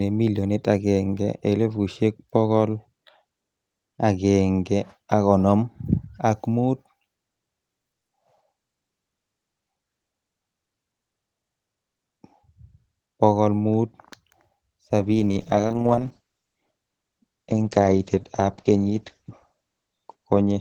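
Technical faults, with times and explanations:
15.0 to 20.6 s, call bitrate drop: from 15.0 s to the end of the clip, the speech loses its top end above about 8 kHz and takes on a rough, watery grain. The call's bandwidth estimate fell and the Opus encoder was pushed to far fewer bits, which fits a fall from around 32 to 12 kbps. Unlike packet loss, there are no gaps or repeats, and unlike a fixed filter, it is a change partway through that lasts to the end.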